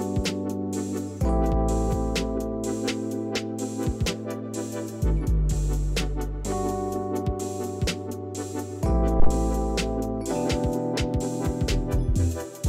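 A deep thump arrives at 9.20 s and is gone by 9.28 s, peaking at about -8 dBFS and dying away within 19 ms. This is a phantom power thump: a supply switched on or off on a live input sent its voltage step through the coupling capacitors.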